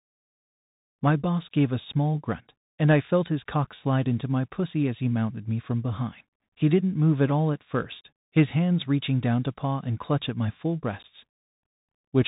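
From start to finish the speech carries the sound of the Bluetooth CVSD headset codec, whose damage is plainly audible. CVSD sends a single up-or-down bit per sample at 64 kHz with an adapting step size, so nothing above 4 kHz survives, and on a spectrogram the energy stops at a hard ceiling there. Loud high content outruns the step and distorts, s sounds turn scratchy, and a granular hiss sits beneath the speech, visible as a fuzzy floor between syllables.

Unconcealed Bluetooth headset packet loss strikes at 3.65 to 3.68 s. About five short voice packets went missing between headset and phone, about 18.8 ms lost in total, scattered across 30 ms with the longest run 7.5 ms. Silence or an idle pattern replaced them, so the waveform shows several abrupt drop-outs with sharp edges, and the spectrogram shows thin vertical gaps across the whole band. The speech comes back quieter for a moment, as happens on a CVSD link. 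The same fault returns at 11.03 to 11.05 s, where about four packets, about 15 ms, were lost, leaving another brief hard-edged hole.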